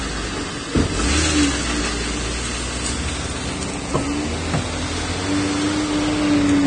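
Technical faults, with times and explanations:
Throughout, Vorbis compression: the sound is hissy and grainy, with a hard ceiling at 9.7 kHz, roughened tones and softened attacks. The likely cause is heavy Vorbis coding, which fits a bitrate near 26 kbps. The treble residue is quantised so coarsely that detail turns into noise of similar energy. That is what separates it from a plain low-pass filter, which would sound dull but clean, and from MP3, whose damage is more metallic and swirly.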